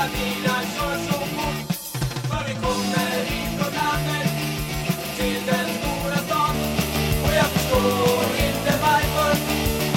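Channel delay (comb filtering) runs from 0.0 to 6.54 s: one channel arrives roughly 5 ms late, and summing to mono cancels shared content at evenly spaced frequencies, starting near 100 Hz. That leaves fixed spectral notches and a hollow, phasey colouring over the audio.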